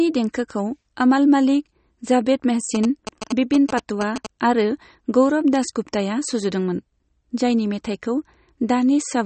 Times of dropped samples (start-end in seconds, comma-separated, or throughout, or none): none